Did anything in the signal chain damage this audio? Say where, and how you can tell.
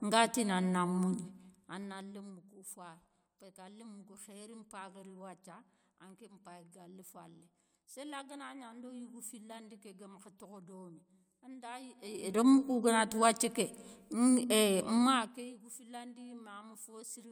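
Yes. From 1.14 to 2.44 s and again from 14.96 to 15.58 s, a fine ticking rides on the speech as its level drops by roughly 20 dB. This is zipper noise from a gain stage at the driver or buffer level. The fade moves in unsmoothed 2 dB steps, about ten per second in the first passage and about twenty in the second. Each abrupt jump leaves a small click, and together they form the zip.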